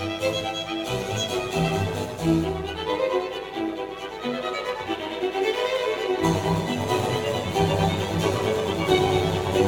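A metallic buzz with extra tones around each note runs through this music from start to finish, the level pulsing by about 6 dB around a hundred times a second. That is overlap-add ripple: the audio was rebuilt from windowed frames whose overlaps never sum to a steady gain.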